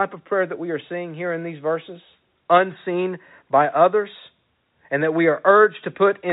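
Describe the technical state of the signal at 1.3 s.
At 1.3 s the speech is intact, carried in the narrow 4 kHz band of G.711 telephone coding with no fault present.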